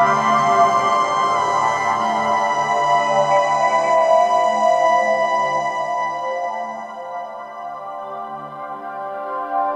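Nothing in this one trips the ear at all; it just runs along with no dropouts, glitches or other technical trouble anywhere in it.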